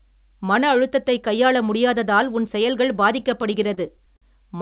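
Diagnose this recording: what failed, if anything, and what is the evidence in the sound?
Repeated stalls (stutter) from 3.2 to 4.24 s, just after "கையாள முடியாததால் உன் செயல்கள்": nine brief holds, longest 50 ms, where late packets emptied the jitter buffer and the last sound was stretched.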